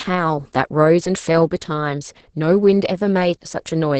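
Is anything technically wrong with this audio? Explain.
Yes. Opus voice compression runs throughout the speech: a SILK linear-prediction coder at a low rate, which fits roughly 10 kbps, rebuilds the voice from a coarsely coded excitation, leaving it muffled, hoarse and slightly robotic. A spectrogram shows nothing above about 8.7 kHz and smeared, blurry harmonics.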